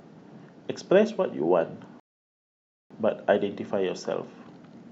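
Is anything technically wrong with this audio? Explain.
Yes. At 2.00 s the speech halts into 0.91 s of silence, then resumes exactly where it stopped: a rebuffering stall, the player waiting for more downloaded audio.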